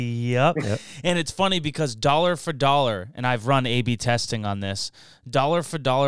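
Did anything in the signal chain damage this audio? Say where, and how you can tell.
No, nothing along the way has left a mark I can hear on this speech recording.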